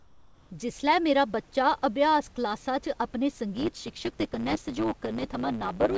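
Right at the start, from 0.0 to 0.5 s, the background sounds like comfort noise in place of the background: a smooth, featureless hiss instead of real room detail, sitting about 32 dB below the loud parts and only about 1 dB off the level that follows. The likely cause is discontinuous transmission: the sender goes quiet during a pause and the receiver fills the gap with synthetic noise shaped roughly like the room, until real sound resumes.

From 3.54 s to the end there's a block size mismatch (truncated): one stage hands over longer blocks than the next reads, so the tail of each block gets thrown away. You hear it as a steady buzz at 109 Hz, the block rate, and the speech runs 1.09 times fast while keeping its timbre. The call codec's band limit, with nothing above 8 kHz, and the low room noise sit underneath the speech.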